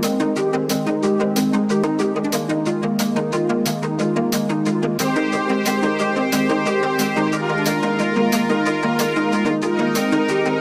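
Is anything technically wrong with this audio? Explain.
Yes. Damaged data in a compressed stream produces brief glitches at 1.84 s and 9.45 s. The decoder misreads corrupt frames and loses sync, giving a chirp, squawk, click or short hole.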